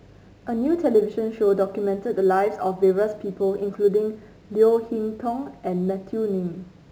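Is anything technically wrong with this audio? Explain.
Yes, there's crude rate conversion running the whole way through the speech. It sounds like nearest-sample dropping, likely a 48 kHz to 44.1 kHz change with no filtering. That leaves a gritty, inharmonic fizz tracking louder and brighter syllables, sitting roughly 35 dB under the signal.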